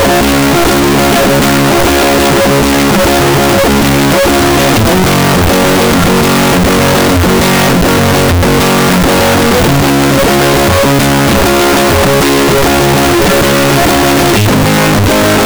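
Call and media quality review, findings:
Harsh, very loud distortion across the whole music clip; quiet passages as loud as peaks. Likely signed and unsigned mixed up on 16-bit samples, top bit flipped so every zero crossing jumps rail to rail. Unlike clipping, low-level sections don't stay quiet.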